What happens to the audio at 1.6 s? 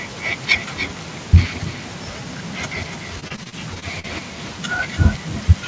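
At 1.6 s the speech carries an echo with no canceller, present across the whole clip: the far end's loudspeaker feeds its microphone, so a thinner copy returns roughly 300 ms later, about 14 dB below the direct speech, with no suppression applied.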